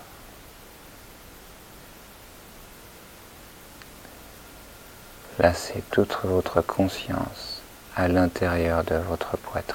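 No technical faults can be heard, so there is nothing to describe in time order.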